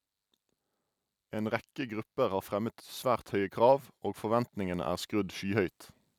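A speech recording where the level creeps up on you: from about 1.31 s to 5.78 s there's automatic gain rising, with the whole thing getting roughly 7 dB louder over those four and a half seconds. The AGC has decided the input is too quiet and is slowly winding its gain up, so the voice and the room noise underneath it swell together rather than the talker actually getting louder.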